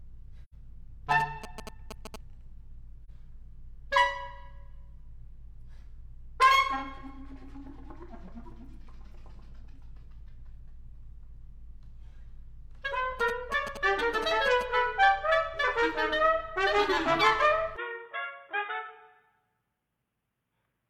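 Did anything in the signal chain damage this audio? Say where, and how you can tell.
Yes. The codec lost AAC frames, and the decoder muted them to zero, leaving a soft-edged hole and a brief dip: two frames at 0.43–0.54 s, one at 3.05–3.09 s.

GSM signalling bursts from a nearby 2G phone were rectified in the analogue wiring, giving galloping ticks and 217 Hz buzz, about 10 dB down, at 1.11–2.16 s and 13.20–14.63 s.

From 17.77 s the sound turns dull, cut off above 3.8 kHz, about 5 dB quieter, with new noise near 50 dB below. The likely cause is the input switching to a poorer device.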